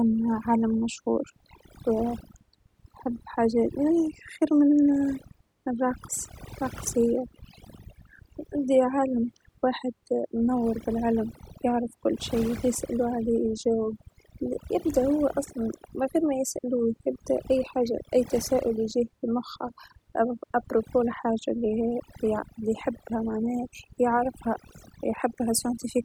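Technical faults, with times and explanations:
Throughout, overdone noise removal: a noise reduction stage was set too aggressively for a noisy recording, so any frequency band that came close to its noise estimate was pushed far down or switched off, and the quieter parts of the speech were cut away along with the noise. What was steady background noise becomes near silence dotted with twinkling specks, and the voice is missing its softer detail.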